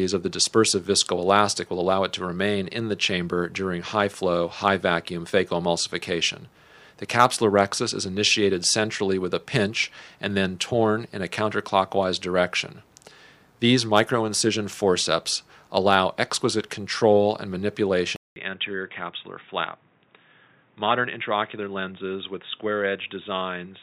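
At 18.16 s a 200 ms silence falls, after which the sound runs dull and boxy, with nothing above 3.8 kHz, slightly quieter, and carrying a new faint noise floor, until the end. That pattern likely marks the input switched to a poorer device, not a simple filter change.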